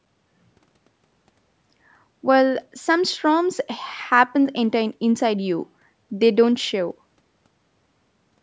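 Nothing stood out on listening to this speech; the call microphone processing it passed through trims the lowest bass and leaves nothing above 8 kHz, as expected for that path.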